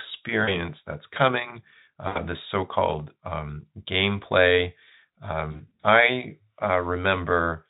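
At 0.43 s, just before "that's coming", then right after "that's coming" at 2.07 s, and across 5.51 to 5.85 s, VoIP packet loss concealed by the speech codec smears the speech into a fading buzz or coloured noise.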